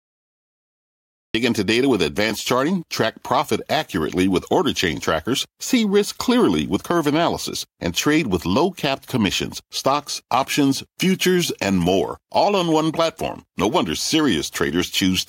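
The clip opens with digital silence until 1.35 s, then a cut-off start: capture began late, so speech enters abruptly mid-sound at "into data with advanced", with no natural attack.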